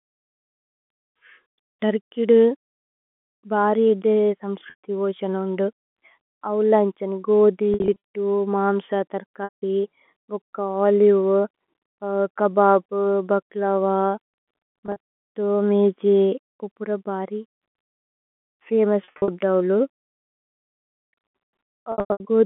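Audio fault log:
4.70–4.79, 7.74–7.96, 9.44–9.62, 14.86–14.96, 19.04–19.28 and 21.92–22.20 s: packet loss with pitch repetition. The receiver fills each gap by looping the last pitch period, so the speech briefly holds on a buzzy tone. In the longer runs, of about 80, 100, 120 and 180 ms, that tone fades toward silence before the speech cross-fades back.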